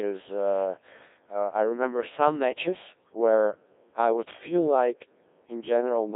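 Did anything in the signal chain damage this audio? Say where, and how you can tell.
Yes. A Codec 2 vocoder at the codec stage runs through the whole clip: the speech sounds robotic and buzzy from start to end, with a heavy loss of natural texture, which fits a very low rate around 1.6 kbit/s. The decoder rebuilds the voice from sine waves driven by pitch, voicing, energy and a coarse spectral envelope, so the original waveform is gone. The band sits roughly between 300 Hz and 3.6 kHz, with nothing above 3.7 kHz.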